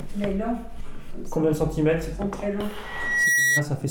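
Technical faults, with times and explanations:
2.84 to 3.65 s: loudspeaker feedback squeal. A single 1.9 kHz tone swells over about half a second and settles roughly 5 dB above the rest of the sound. A microphone is picking up its own loudspeaker, and the loop gain at that frequency exceeds one, so the tone keeps reinforcing itself.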